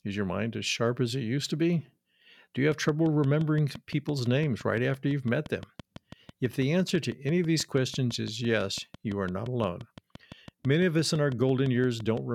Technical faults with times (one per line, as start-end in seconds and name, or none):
2.72-12.18 train of clicks